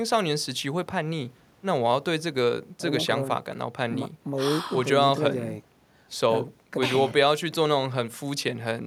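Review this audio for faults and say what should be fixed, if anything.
Nothing in the signal needs fixing, since the level and continuity stay steady throughout with no audible technical defect to correct.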